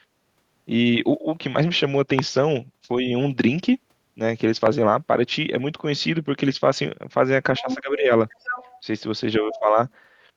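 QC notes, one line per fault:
2.19 s and 4.66 s: loud pop. A single sharp pop at each time, roughly 20 dB above the speech, which carries on beneath it. It is likely a voltage step from a plug, switch or static. On the waveform it is a tall narrow spike. On the spectrogram it is a thin vertical line across all frequencies.
7.58–7.75 s, 8.33–8.81 s, 9.54–9.59 s: other side's voice leaking through. A second voice comes through in short scraps. It is strongest at the first stretch, about 5 dB below the speech, and faintest at the last. The likely cause is far-end loudspeaker sound that the echo canceller did not fully remove. The spectrogram shows a second, weaker set of harmonics overlapping the main ones.
7.60–8.11 s and 9.39–9.78 s: speech suppressed in double talk. While the other voice overlaps, the main speech dips in pieces. The first dip goes down by about 15 dB over roughly 0.4 s and the second by about 10 dB over roughly 0.3 s. 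The likely cause is the echo canceller turning everything down when it could not separate the two voices. The waveform envelope sags, and the spectrogram energy thins in patches.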